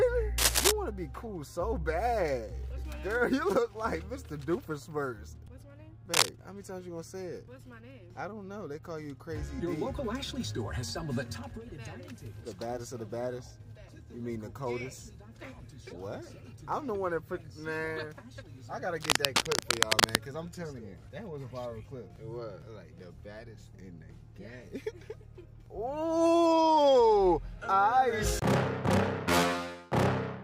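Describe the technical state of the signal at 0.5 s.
At 0.5 s the signal carries cable scratch noise, running from about 0.38 to 0.71 s and sitting roughly 5 dB above the underlying sound. It is likely a worn cable or connector being moved, its contact resistance jumping about and injecting ragged bursts of noise. It is heard as a brief scratching rustle. On a spectrogram it shows as dense, uneven broadband smears; the waveform shows jagged, irregular spikes riding over the signal.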